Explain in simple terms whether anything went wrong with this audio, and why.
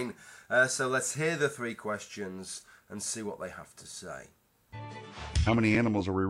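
Two short glitches come from a corrupt frame decoded. Around 2.54 to 2.64 s, damaged data across a couple of compressed frames plays as a faint glitch. At 5.47 to 5.53 s, a single bad frame gives a much louder glitch.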